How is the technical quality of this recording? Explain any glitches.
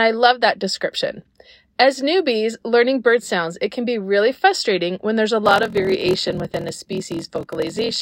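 The recording has one clear fault: a block size mismatch (padded) from 5.44 s to the end, starting just after "frustrating when there's a". One stage hands over shorter blocks than the next reads, which fits 1024-sample writes, and each shortfall is filled with silence. The gaps recur as a 41.7 Hz buzz, and the audio plays at 0.889 times normal speed. A stutter would repeat audio, whereas these gaps are regular silences with an overall slowdown.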